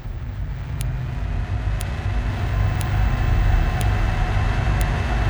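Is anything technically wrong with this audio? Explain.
Yes. A file header is played as audio at 0.81, 1.81, 2.81, 3.81 and 4.81 s, once per second. The clip is built from one-second pieces whose WAV headers were never stripped, so those header bytes play as samples, giving a sharp, loud click at each joint.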